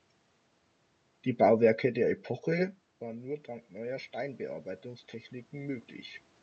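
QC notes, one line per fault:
2.47–4.48 s, automatic gain rising: The talker moves back around 2.5 s, and the input falls by about 18 dB. The gain control hears the quieter signal and raises its gain slowly, by about 6 dB over two seconds. It boosts everything it receives, so the room noise swells along with the voice. The change is gradual, heard as a slow fade-up rather than a jump. It makes up only part of the drop.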